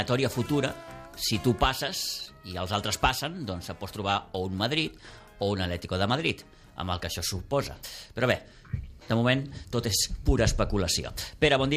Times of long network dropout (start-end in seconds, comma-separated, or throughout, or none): none